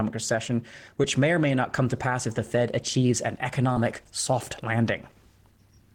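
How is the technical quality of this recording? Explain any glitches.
Two brief glitches mark this speech recording, both short concealed packet loss. At 1.02 s, just before "may or may not", and from 3.73 to 3.77 s, just after "achieves an", small chunks of audio arrived too late to decode. The receiver patched each gap by extending the preceding sound and then crossfading back, which is heard as a quick smear or wobble. On a spectrogram, each patch shows briefly repeated or blurred harmonics. On a waveform, the cycles look slightly too regular before they rejoin the true signal.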